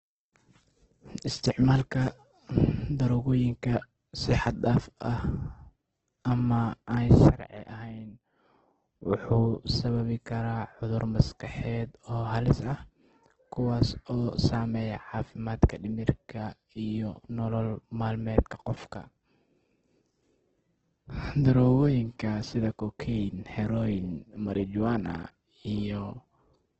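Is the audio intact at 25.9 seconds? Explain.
No. At 25.9 s, as throughout the speech, the sound is grainy and rough with nothing above 8.3 kHz, most likely heavy Opus compression at a very low bitrate near 12 kbps. Its music mode fills starved bands with noise, so the speech turns grainy rather than swirling like MP3.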